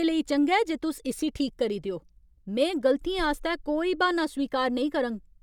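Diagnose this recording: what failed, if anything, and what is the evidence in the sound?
Nothing in the speech points to a failure at any stage of the chain; the signal stays continuous and intact throughout.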